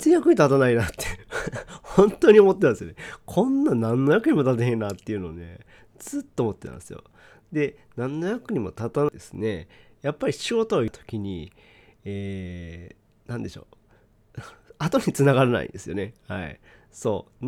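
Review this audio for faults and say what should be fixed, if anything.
Two brief disruptions break into the speech at 9.09 s and 10.88 s: damaged data in a compressed stream, where corrupted bytes made the decoder misread frames, lose sync and jump ahead to the next valid frame header. Protect the file during storage and transfer with checksums and error-checked delivery, so corrupted segments are caught and replaced.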